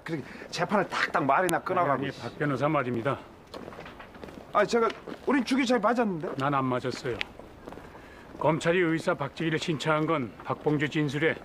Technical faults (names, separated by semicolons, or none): file header played as audio